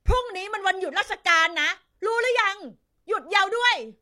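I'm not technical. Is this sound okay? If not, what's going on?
No. At about 3.35 to 3.40 seconds the speech briefly jumps forward, losing roughly a tenth of a second. This is compressed frames skipped: chunks of the compressed audio were missing or damaged, so playback jumped past them.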